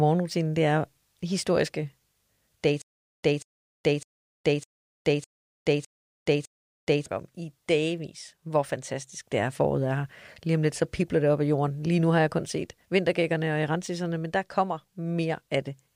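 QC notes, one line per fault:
2.82–7.06 s, stutter with silent gaps: a 189 ms burst of speech repeats seven times, every 606 ms, each followed by about 417 ms of dead digital silence, before playback resumes at "om i dagvis hvor". This likely comes from a stalled stream replaying its last fragment and running empty, so the speech in between is lost.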